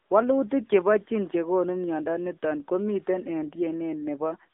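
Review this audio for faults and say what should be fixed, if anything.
Throughout, the speech sounds thin, boxed-in and buzzy, with nothing above 3.7 kHz and little below 250 Hz: AMR narrowband mobile codec damage, at a low bitrate of roughly 8 kbps. To prevent it, record or route the call over a wideband path instead of a narrowband mobile link.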